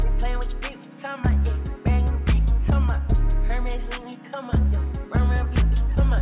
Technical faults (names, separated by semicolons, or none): none